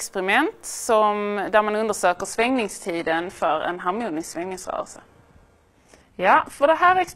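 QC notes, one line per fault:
2.16 s to the end: adaptive stream at a lower bitrate. The sound switches abruptly to a much coarser encoding with no gap or dropout. From that point nothing is present above 12.3 kHz, and the remaining treble takes on a synthetic, swirly quality with more audible codec artefacts. This fits a player stepping down from an AAC-LC stream near 96 kbit/s to an HE-AAC stream near 16 kbit/s after the connection slowed, with the upper band rebuilt rather than coded.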